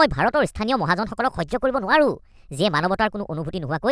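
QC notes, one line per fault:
Throughout: wrong sample rate, speech plays about 1.38 times fast and 5.55 semitones high, fitting 16 kHz audio played at 22 kHz; spectrogram formants shift upward, waveform compressed.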